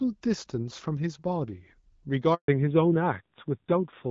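At 2.34 s the speech cuts out for 140 ms, to 2.48 s: a handover gap, where no speech frames arrived while the call switched networks. From 2.48 s onward there is a fallback to narrowband. The HD Voice wideband sound gives way to audio with nothing above 4 kHz, duller and rougher, consistent with a low-rate narrowband codec.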